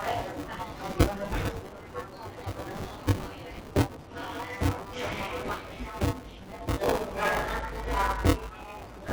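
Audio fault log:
Throughout: noise suppressor applied to music or sounds. A speech-tuned suppressor treats steady sound as noise, so level swings by about 10 dB, pumping and thinning held parts.
Throughout: buffer tearing. Writer and reader cross inside each period, splicing in roughly a third of each buffer from about 20 ms earlier, heard as a 200 Hz rattle.
1.61–2.61 s, 3.29–4.15 s, 5.61–5.78 s, 6.24–6.56 s, 8.8–9.07 s: sound cut by the noise suppressor. Steady portions sink by up to about 7 dB and tails shorten, while sudden onsets survive.
3.55 s: lost LE Audio frames. About 22.5 ms went missing, and the decoder filled the gap with a recycled spectrum, leaving a brief noisy smear.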